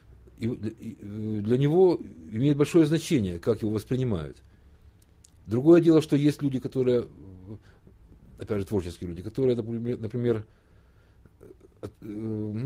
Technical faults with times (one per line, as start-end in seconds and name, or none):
none